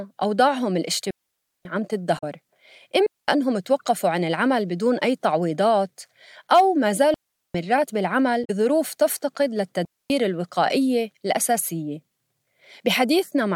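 Clean holes of near silence, with no noise burst on either side, open at 1.11 s (about 0.55 s long), 3.06 s (0.22 s), 7.14 s (0.4 s) and 9.85 s (0.25 s). These are digital wireless dropouts, where the receiver mutes after losing too much data. Brief glitches at 2.15 to 2.24 s and 8.41 to 8.50 s come from damaged data in a compressed stream, which throws the decoder out of sync until it finds the next frame.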